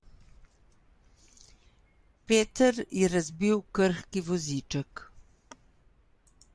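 Nothing goes wrong anywhere in this bit of speech, so there's no technical fault to point to at any moment.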